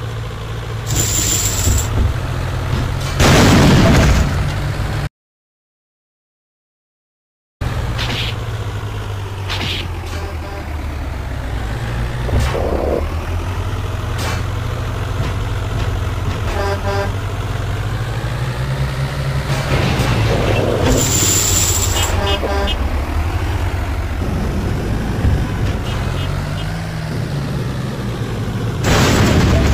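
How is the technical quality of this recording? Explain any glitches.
The recording has one clear glitch: an audio dropout to silence from 5.07 to 7.61 s. For about 2.5 s the sound stops abruptly and is replaced by silence, likely from the input briefly disconnecting or muting while recording continued. Unlike a natural pause, no room tone remains, and the sound resumes mid-flow.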